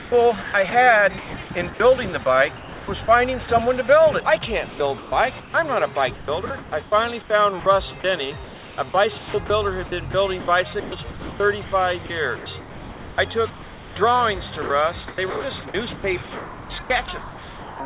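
Sound chopped by the voice detector at 0.0–1.8, 2.58–3.48, 4.68–5.54, 6.14–13.96 and 14.62–17.8 s: stretches of sound drop to comfort noise, likely from the sender's voice detector gating transmission, over a call path whose 4 kHz ceiling fits G.711.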